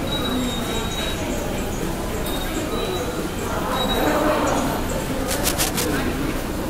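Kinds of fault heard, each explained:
Cable scratch noise: from 5.2 to 6.03 s, dense, irregular bursts of scratching and rustling sit over the sound, only a little below its level. The likely cause is a worn cable or connector being moved, its contact resistance fluctuating rapidly as it shifts.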